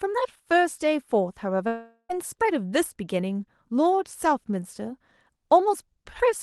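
At 1.67 s the speech cuts out until 2.11 s. This is most likely a long network dropout. About 420 ms of audio never arrives. The receiver fills the gap by stretching the last sound into a fading buzz for roughly 0.4 s. The final 70 ms or so are near silence. Speech then resumes mid-flow, with the missing stretch simply gone. The surrounding audio carries call-codec coloring, with highs rolling off near 12 kHz.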